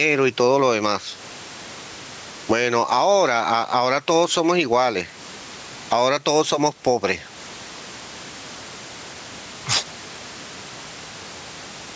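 The microphone gain was likely set far too high, with a fast limiter or compressor clamping it down on every loud syllable throughout the speech. The result is gain pumping: the level swings by about 15 dB, with faint room noise about 36 dB below the speech. Loud and quiet passages sit unnaturally close together, giving a squashed quality to the whole recording.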